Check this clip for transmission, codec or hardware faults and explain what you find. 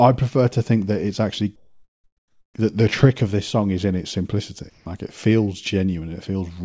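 One fault turns up twice: comfort noise in place of the background, in two pauses in the speech.

From 1.56 to 2.54 s and again from 4.70 to 4.86 s, the real room background gives way to a steady, featureless hiss. It is about 5 dB quieter in the first gap and about 10 dB quieter in the second. The likely cause is discontinuous transmission: with no speech detected, the sender stops sending, and the receiver fills the silence with synthetic noise shaped only roughly like the original background. On a spectrogram these stretches appear as smooth, uniform bands with none of the fine texture around them, and there is a clear step down in level at each boundary. The waveform shows a flat, even noise floor.

Across the whole clip the spectrogram also shows nothing above 8 kHz, which fits a wideband call codec such as G.722.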